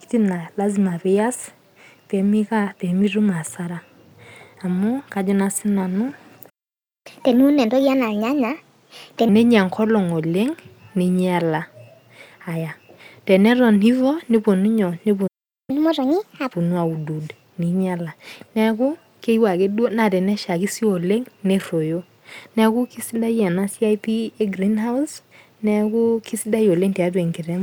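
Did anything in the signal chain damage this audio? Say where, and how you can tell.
Yes. A playback stall cuts the speech to silence from 6.49 to 7.07 s, just after "kajo naa sii nanu", and again from 15.27 to 15.70 s, after "nepuonu inyoo". The gaps last 0.56 s and 0.41 s. The likely cause is the player's buffer running dry or its thread blocking.

Catch-up at higher speed follows each stall, which places the fault in playback. From 7.07 to 9.29 s the audio runs at 1.25 times normal speed and about four semitones sharp. From 15.70 to 16.53 s it runs at 1.5 times speed and about seven semitones sharp. The player is resampling its backlog to regain the lost time.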